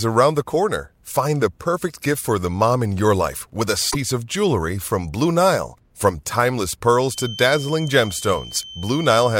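At 3.88 to 3.95 s, just before "of jewelry from", there's a quick glitch from damaged data in the compressed stream. Some bytes got mangled, so the decoder lost sync and skipped ahead to the next good frame header, leaving a short blip.

From 7.07 s to the end, a thin steady tone at 3.1 kHz sits about 15 dB under the speech, wavering a bit in level. It's a feedback whistle, likely from a speaker-to-mic loop hovering right at the edge of runaway feedback.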